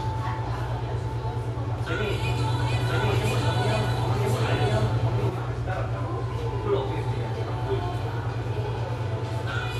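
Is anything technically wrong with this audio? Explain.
Yes. From 2.23 to 5.29 s there is a doubled audio track: a second, full-band copy trails about a second behind at roughly the original's level, likely from a slower second capture path or out-of-step edit. Unlike an echo, it has no decay or room colour, and it starts and stops abruptly.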